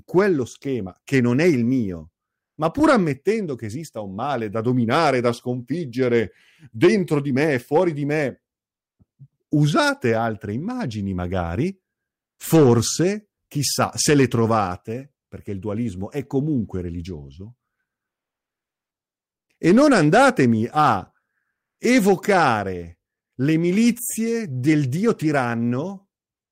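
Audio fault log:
Throughout, hard clipping: the speech reaches a stage at about 5 dB more level than it can pass, so the tallest peaks hit the ceiling and are sliced flat. Only a small fraction of the waveform, under one percent, goes over. The flattened tops add high harmonics that were never in the sound, heard as brief crackle and edgy grit on the loudest syllables rather than a constant fuzz across the whole clip.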